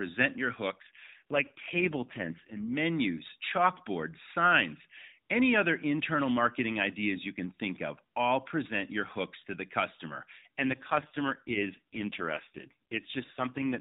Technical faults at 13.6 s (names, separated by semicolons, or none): AMR rate drop